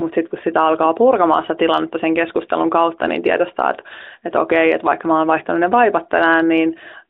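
Nothing here stands out as a technical fault, just speech with the narrow, phone-line character of a mobile call.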